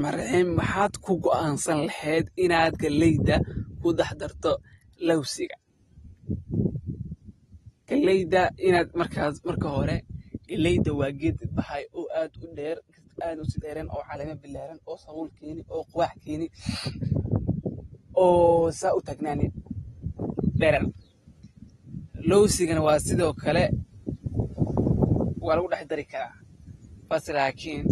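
Throughout, likely AAC compression at a bitrate fitting about 32 kbps removes everything above 12.4 kHz, leaving the speech plainly dull and smeared.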